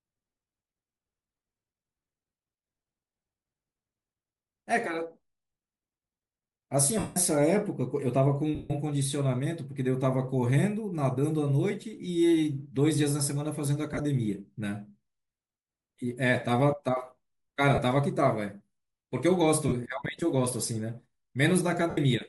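Throughout, the speech likely passed through Bluetooth LC3 compression at 48 kbps, which strips much of the upper spectrum and refills it with noise, leaving a plainly grainy, breathy edge. Lost LE Audio frames, where the decoder repeats the last spectrum with scrambled signs, smear the speech into noisy hiss at 6.99 s (0.17 s), 8.55 s (0.15 s), 13.93 s (45 ms scattered over 60 ms), 17.74 s and 19.68 s (about 38 ms each), and 21.90 s (75 ms).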